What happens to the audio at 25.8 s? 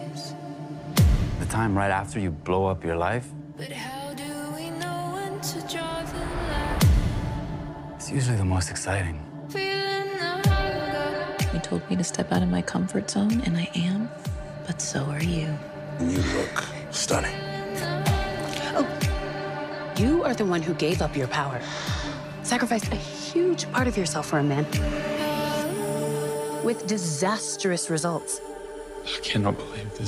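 Nothing goes wrong at 25.8 s; the audio plays through that moment intact, with no dropout, click or distortion.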